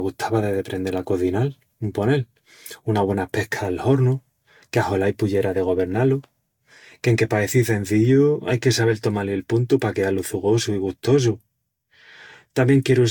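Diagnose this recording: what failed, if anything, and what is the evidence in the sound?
The damage sits at the codec stage, and it runs through the whole speech clip rather than at any one moment. The sound is swirly and hollow, with consonant attacks smeared, more than a single pass at a bitrate that sounds like around 70 kbit/s Vorbis would leave, and nothing survives above 19.4 kHz. That points to generation loss, likely from about four decode-and-re-encode rounds, each requantising on a shifted frame grid so the noise and spectral holes stack up.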